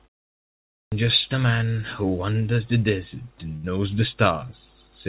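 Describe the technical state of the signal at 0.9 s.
At 0.9 s the sound is still missing: after the 0.34 s of silence at the start, the audio stays swallowed from 0.34 to 0.92 s, about 0.58 s lost, then cuts in abruptly without its opening. This is a clipped start after a pause, caused by the output device sleeping through the silence and needing time to wake and lock again.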